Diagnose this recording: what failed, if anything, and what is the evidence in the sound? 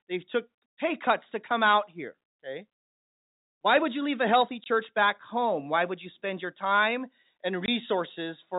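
The failure is at the network stage: packet loss filled with silence. The speech drops out twice, at 4.64 s and at 7.66 s, each gap lasting 20 ms, which fits a single lost 20 ms packet replaced by silence. The receiver inserted nothing to conceal the loss, so each gap starts and ends abruptly. On a waveform these show as flat-line notches. On a spectrogram they are narrow vertical blank stripes across the telephone band, which ends at 4 kHz because of the G.711 coding.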